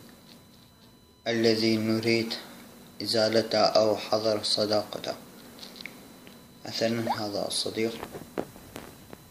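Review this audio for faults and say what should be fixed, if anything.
A USB whine runs through the whole clip. It is a steady, fixed-pitch tone based on 1 kHz, with its strongest component at 4 kHz, the fourth multiple. It sits roughly 35 dB below the wanted sound. The 1 kHz base points to the 1 ms frame timing of a USB bus. Current drawn in those regular bursts leaks into the audio through a shared power or ground path. To prevent it, power the interface from a clean supply, or fit a USB isolator or ground-loop breaker between computer and audio device.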